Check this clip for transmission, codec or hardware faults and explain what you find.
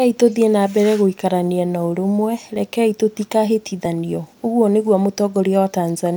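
Three short faults appear in this speech clip. At 2.56 s, 3.86 s and 5.05 s, a small forward jump in the speech points to a likely dropped buffer (overrun): a few milliseconds of audio, around 15 ms at 3.86 s, were overwritten before being read, and the two sides were joined without a gap.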